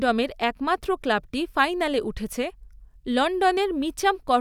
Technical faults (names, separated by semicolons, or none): none